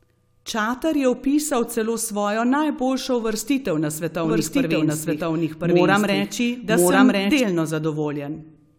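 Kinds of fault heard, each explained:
Doubled audio track: From 4.24 s to 7.40 s a second copy of the speech plays alongside the first. It trails by about one second and is roughly as loud as the original. The copy is full-band and dry, with no decay or added room sound. It cuts in and out abruptly at both ends. The likely cause is the same signal reaching the mix twice, once through a slower path or through misaligned edited copies.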